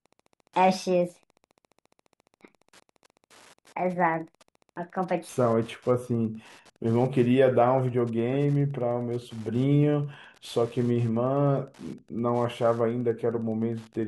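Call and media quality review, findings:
Wi-Fi interference, throughout: steady ticking at a 102.4 ms period, just under ten per second, about 35 dB below the speech. Nearby Wi-Fi radio, beacons and data bursts rectified in the analogue path. Fixed beacon spacing distinguishes it from GSM buzz or random crackle.

Section at the wrong speed, 0 to 5.29 s: speech runs 1.48 times fast and about seven semitones high, then drops to normal pitch and tempo. Likely an editor or player resampling against the wrong clock. Pitch and tempo shift together, unlike time-stretching or pitch correction, which change only one.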